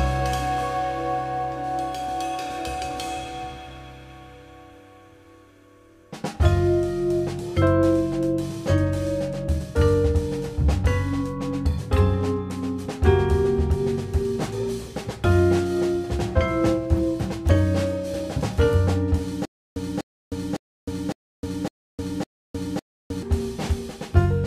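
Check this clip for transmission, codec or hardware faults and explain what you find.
One fault is audible. Stutter with silent gaps, 19.45 to 23.22 s: a stalled stream likely replayed its last 246 ms fragment six times, each followed by 310 ms of silence.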